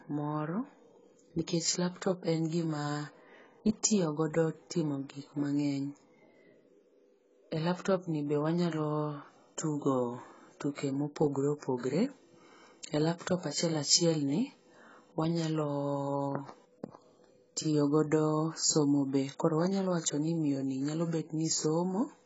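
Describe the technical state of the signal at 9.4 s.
At 9.4 s the speech shows heavy damage from likely AAC compression, present across the whole clip. Nothing sounds above 7.7 kHz. The coder starved high bands of bits, fitting roughly 16 kbps. Sibilants turn fizzy and smeared, and sustained sounds warble.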